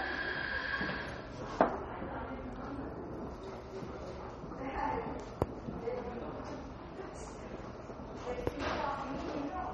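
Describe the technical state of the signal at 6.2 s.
At 6.2 s you're hearing MP3 compression, present across the whole clip: nothing above 11.8 kHz, watery swirling where weak components drop out, likely from a starved encoder around 32 kbps.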